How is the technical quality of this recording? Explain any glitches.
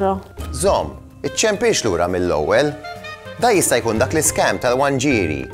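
The technical quality holds up, with no glitches to explain.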